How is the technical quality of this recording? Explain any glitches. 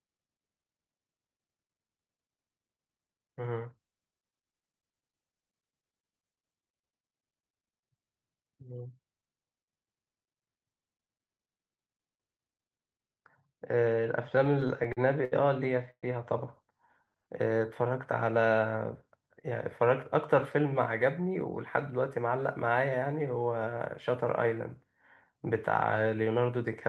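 The recording is a speech call passed through an Opus path with audio up to about 12 kHz, and it has a cluster of network-timing glitches in its second half.

Repeated stalls (stutter), 14.27 to 15.34 s: packets kept arriving late, so the jitter buffer ran dry about ten times and the receiver stretched the last sound to cover each wait. About 183 ms is filled this way, the longest single gap 71 ms. Nothing is lost, but the speech drags and stutters.

Call audio freeze, 15.91 to 16.05 s: the sound hangs for about 121 ms, with roughly 80 ms of it dropping to silence before speech resumes where it stopped. The likely cause is packets held up in transit, draining the jitter buffer and adding a 121 ms delay.

Jitter buffer slow-down, 17.05 to 17.54 s: to rebuild its reserve, the receiver repeated single pitch periods, adding 68 ms. Speech runs at 88% speed with unchanged pitch, so sounds are audibly drawn out.

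Jitter buffer speed-up, 19.51 to 21.34 s and 26.00 to 26.29 s: the buffer was holding more audio than its target, so the receiver trimmed short pitch-period pieces, around a tenth of a second in the first span and about 50 ms in the second. Speech runs at 104% and then 113% speed, the later stretch clearly hurried.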